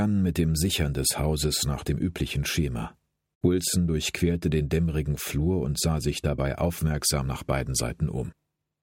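No faults are audible anywhere in this recording.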